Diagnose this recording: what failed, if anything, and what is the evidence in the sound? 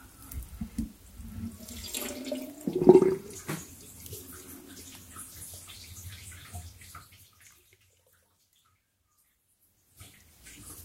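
No fault found in this recording.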